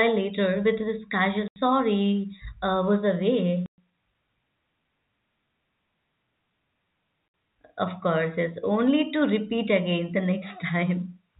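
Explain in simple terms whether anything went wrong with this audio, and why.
Three short gaps cut the speech at 1.48 to 1.56 s, 3.66 to 3.78 s and 7.28 to 7.34 s. This is packet loss filled with silence: chunks of audio never arrived and were replaced by dead quiet, with hard edges. The gaps are multiples of 20 ms, which fits 20 ms packets. Unlike smarter concealment, nothing is patched in to mask them. The muffled telephone sound is simply normal phone-line coding.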